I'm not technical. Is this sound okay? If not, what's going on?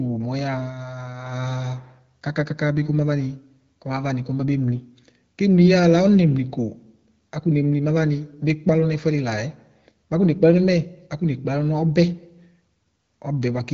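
Yes, this sound is okay; nothing here sounds wrong.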